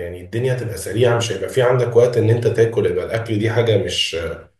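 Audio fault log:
Nothing in the speech stood out as a problem on listening.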